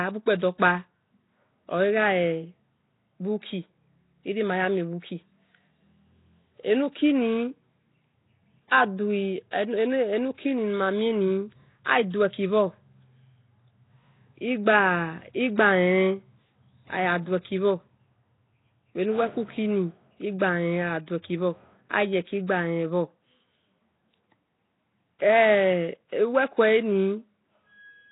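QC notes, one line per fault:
Throughout: Nellymoser compression. The speech appears to have passed through a low-rate block codec, likely Nellymoser Asao at a setting that fits about 16 kbps. The coder spends a fixed, meagre bit budget on each short block, so quieter bands get no bits and are replaced with noise. The damage is heavy: a rough, hissy halo surrounds the speech, the speech smears into an underwater blur, and nothing survives above 3.8 kHz.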